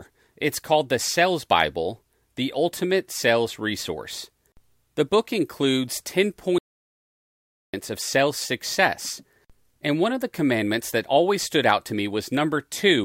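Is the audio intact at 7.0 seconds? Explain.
No. An audio dropout to silence runs from 6.58 to 7.74 s, between "book includes" and "of sales success". The input was likely lost while zeros kept being written, so speech cuts to dead silence with no room tone: a flat waveform line and a blank spectrogram column.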